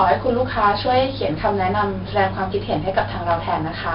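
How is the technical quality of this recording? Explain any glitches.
The recording is heavily degraded by a single fault that runs through the whole speech clip: 4-bit ADPCM compression. Each sample is stored as a coarse 4-bit step from a predicted value, so the coding error rides along with the signal as a gritty hiss that swells on every loud syllable. Sharp onsets distort because the step size cannot grow fast enough to follow them. Nothing reaches above 5.3 kHz, which dulls the speech and fits a low sample rate and a bitrate of around 44 kbps.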